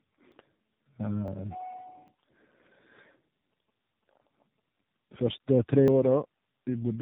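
Throughout, the speech sounds rough, muffled and warbly. This is tandem speech coding: the signal was decoded and re-encoded across several links, apparently three speech codecs in a row, such as AMR-NB, CVSD and AMR-NB again, each compounding the last one's damage.

At 0.32 s, 1.28 s, 2.08 s, 3.84 s and 5.88 s there are points where the sound jumps ahead with no gap, dropping roughly 70 ms at the first and about 40 ms at each of the others. Each is likely a dropped buffer (overrun), where unread samples were overwritten and the surrounding audio spliced together.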